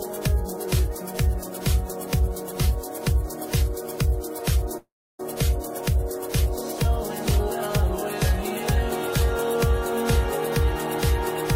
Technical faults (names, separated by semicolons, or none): long network dropout